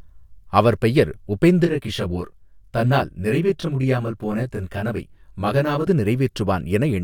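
From 1.65 s to 5.87 s the speech turns rough and slightly doubled because of channel delay (comb filtering). One channel arrives roughly 20 ms late, and when the two are summed to mono the shared content cancels at evenly spaced frequencies. The first notch sits around 20 Hz, with the rest following closely up the spectrum. The notches stay fixed, unlike the sweeping notches of a flanger. At this long a delay the two copies no longer fuse completely, so the voice sounds slightly doubled.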